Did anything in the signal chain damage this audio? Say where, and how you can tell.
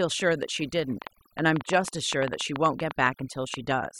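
Yes. A noise suppressor in the processing chain was set far too aggressively, so this is overdone noise removal, present for the whole clip. It drives individual frequency bands down or off whenever they sit close to its noise estimate, and the quieter parts of the speech fall below that threshold along with the hiss. The background collapses to near silence dotted with twinkling specks.

A train of clicks runs from 1.02 s to 3.72 s, about 7.4 per second at an irregular spacing, roughly twenty in all, standing well above the speech level. The repeated, similar-shaped pulses point to the analogue wiring or the power supply, likely interference from nearby equipment or a faulty connection. They are heard as ticking and popping laid over the sound, in the pauses as well.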